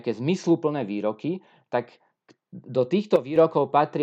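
At 3.16 s the speech and its background noise drop together by about 10 dB in a single step, a sudden gain jump, and stay there until 3.36 s, when the level snaps back up just as abruptly. The likely cause is a digital gain change applied from one sample to the next with no ramp. On a waveform the envelope shows a sheer-sided notch; on a spectrogram every frequency darkens uniformly across those 0.2 s, noise floor included.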